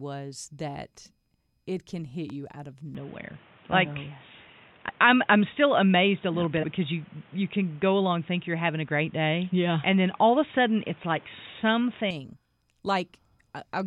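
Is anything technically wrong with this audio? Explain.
Yes, there are three kinds of fault.

Loud pop, 2.30 to 2.32 s: a sudden voltage pulse, likely from a plug, switch, static or driver glitch, enters the signal. It is heard as one sharp pop, peaking roughly 5 dB above the speech, which carries on underneath.

Input switched to a poorer device, 2.95 to 12.1 s: the recording changes to a likely lesser input, such as another microphone or a headset's call profile. With no gap at the switch, the speech turns dull and boxy, with nothing above 3.8 kHz. The level shifts by roughly 5 dB, and a new noise floor appears roughly 30 dB below the speech.

Compressed frames skipped, at 4.88 s and 6.62 s: the decoder leaves out whole frames of compressed audio, either because they are missing or because they were rejected as damaged. The speech jumps ahead by roughly 70 ms and then roughly 200 ms, which fits a 23.2 ms frame length.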